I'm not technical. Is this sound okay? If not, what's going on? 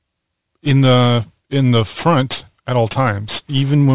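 No. From start to finish the speech has aliasing. The audio sounds as if it was reduced to a low, telephone-like sample rate without first removing the high sounds that rate can't hold. Everything above about 4 kHz gets folded back down as false, unrelated tones, so hissy sounds like s and sh come out gritty and metallic. A simple bandwidth cut would only sound muffled. This sounds harsh and clangy instead.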